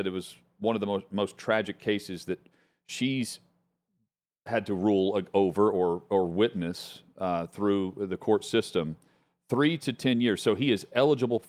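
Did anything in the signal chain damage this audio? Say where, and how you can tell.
No, nothing along the chain has left a mark on this speech that I can hear, so there's no stage to point to.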